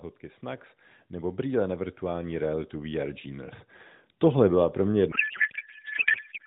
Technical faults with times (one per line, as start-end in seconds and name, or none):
0.40-3.64 automatic gain rising
5.12-6.47 codec payload misread